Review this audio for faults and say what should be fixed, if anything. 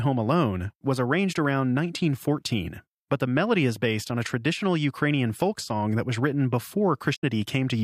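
The compressed speech stream carries damaged data between 7.12 and 7.24 s. Bytes in that stretch were lost or overwritten, so the decoder could not parse the affected frames, lost sync, and had to hunt forward for the next valid frame header before resuming. For roughly 0.12 s the audio breaks up briefly. To prevent it, transfer and store the file with checksums or error-protected containers and re-fetch any segment that fails verification.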